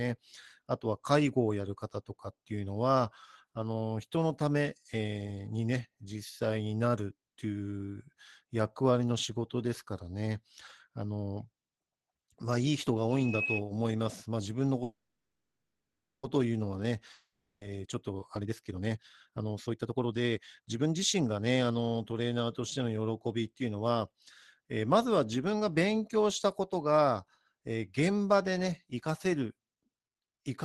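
From 14.83 to 16.26 s there is a call audio freeze. The last sound is carried on as a fading buzz, then about 1.3 s of silence follows before the audio resumes where it stopped, with nothing missing. The likely cause is packets held up in transit, leaving the jitter buffer empty. This inserts about 1.4 s of delay.

From 17.13 to 17.64 s a long network dropout occurs. The sound again trails off as a fading buzz into about 0.36 s of silence, and when audio returns, about 480 ms of it is gone for good. This likely reflects a stretch in which no packets arrived at all.

From 17.83 to 22.21 s a jitter buffer speed-up follows. The speech runs at 132% of normal speed with unchanged pitch and sounds hurried. The receiver trims many short pitch-period slices, roughly 1.5 s in total, to work off the backlog built up earlier. Throughout, the band limit near 12 kHz points to Opus at a low bitrate, around 20 kbps.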